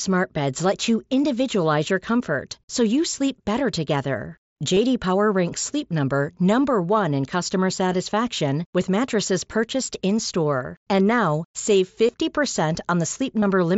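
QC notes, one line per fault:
4.74–4.77 s, 8.40 s, 12.07 s and 13.40–13.42 s: concealed Bluetooth headset packet loss. Short gaps of 7.5 to 22.5 ms follow "you sleep better together", precede "with mattresses purchased", and follow "now save". The receiver filled each gap by repeating a matching stretch of recent waveform. The single lost frame at 8.40 s is nearly hidden, while the runs of two and three frames sound like a brief buzzy tone held at full level with a slight warble as real audio resumes.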